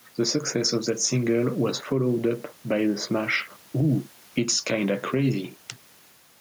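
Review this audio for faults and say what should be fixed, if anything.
Gain pumping runs through the whole clip: the room noise, about 35 dB below the speech, swells in pauses and ducks by around 5 dB under each loud syllable, likely from excessive input gain driving a fast limiter. Set the microphone gain lower and ease the limiter's attack and release.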